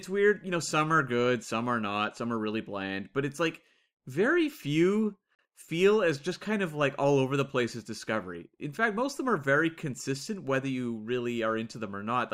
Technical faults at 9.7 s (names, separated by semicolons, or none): none